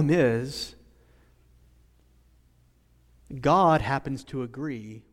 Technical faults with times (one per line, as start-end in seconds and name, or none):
3.63-4.79 zipper noise